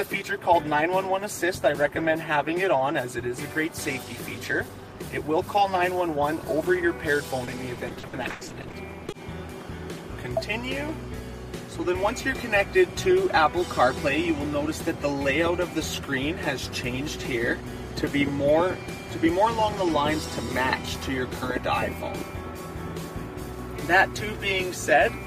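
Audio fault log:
7.45–9.13 s, repeated packet loss (robotic sound): rapid dropouts, each up to 100 ms, are patched by extending the preceding sound, concealing about 460 ms, roughly a quarter of the stretch. Frequent repeated patches produce choppy, robotic texture with missing fragments.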